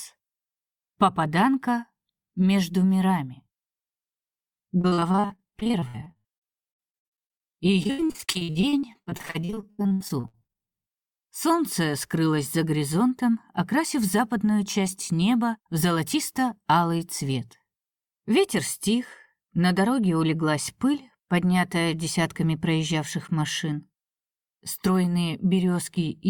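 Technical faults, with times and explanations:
4.81–10.84 s, repeated packet loss (robotic sound). For about six seconds the audio breaks up into dozens of short dropouts, the longest about 82 ms. Each hole is bridged by stretching the last received sound, which covers roughly two fifths of this stretch. The holes come so close together that one patch follows soon after another. That gives a choppy texture, with about 2.4 s of sound missing in total.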